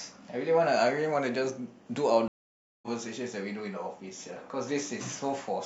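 At 2.28 s the speech cuts to silence for about half a second, then resumes at 2.88 s having skipped roughly 0.4 s of material, entering softly. This is a stream reconnect: the connection dropped, the player rejoined the live stream, and a freshly started decoder eased in.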